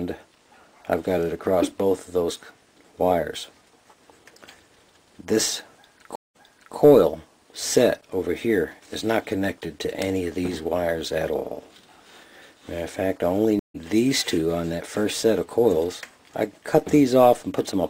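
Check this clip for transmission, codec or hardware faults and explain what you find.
There are two stream reconnect faults. At 6.16–6.77 s and 13.59–13.76 s the connection drops, giving about 192 ms and 150 ms of silence. A fresh decoder then fades the audio back in. The first resumes 418 ms earlier, replaying a bit. The second resumes roughly 150 ms later, skipping a bit.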